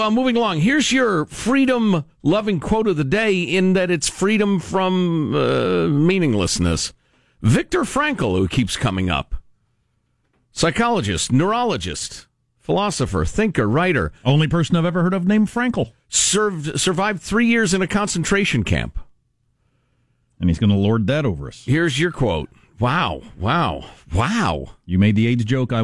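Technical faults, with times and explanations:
Nothing stood out as a technical problem on listening to this recording.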